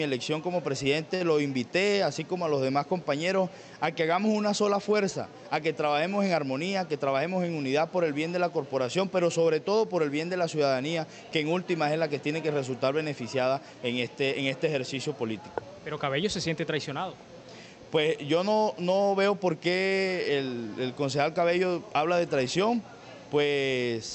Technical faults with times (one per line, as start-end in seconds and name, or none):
1.15-1.22 short stall from a late packet
19.87-19.93 short stall from a late packet
21.91-22.30 jitter buffer speed-up